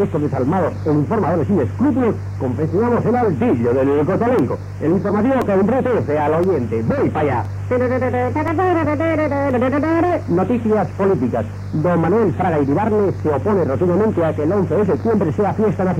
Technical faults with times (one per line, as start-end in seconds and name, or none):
4.39-9.51 periodic USB or driver dropouts